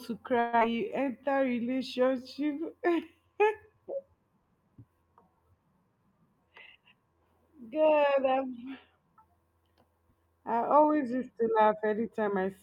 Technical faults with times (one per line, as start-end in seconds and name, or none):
0.39-0.63 long network dropout
0.71-1.25 jitter buffer slow-down
5.88-7.21 jitter buffer speed-up